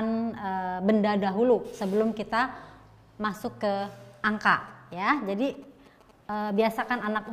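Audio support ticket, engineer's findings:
GSM signalling bursts, 4.68 to 7.28 s. A nearby 2G handset is signalling, and its RF bursts are being rectified in the audio circuit. Result: galloping dit-dit-dit ticks and short 217 Hz buzzes, roughly 25 dB under the main sound, running to the clip's end.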